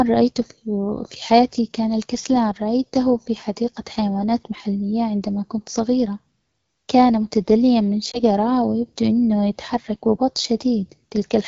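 AMR wideband (HD Voice) coding runs throughout, with speech modelled up to 6.4 kHz and noise-filled above. The rough, raspy texture points to a low rate, around 8.85 kbit/s. A lost AMR speech frame follows at 8.11 to 8.21 s, where the decoder reuses the previous pitch and vocal tract settings at falling gain. The result is a brief dip or warble, consistent with a single missing 20 ms frame.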